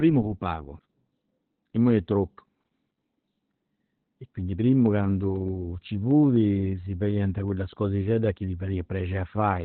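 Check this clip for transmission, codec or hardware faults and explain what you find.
One codec fault runs through the whole speech clip. Opus voice compression makes it muffled, hoarse and faintly robotic, with nothing above about 4.3 kHz. The encoder's SILK predictive mode fell back to narrowband and coded the excitation coarsely, which points to a starved bitrate near 8 kbps.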